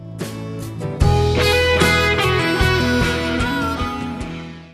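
No technical faults are audible.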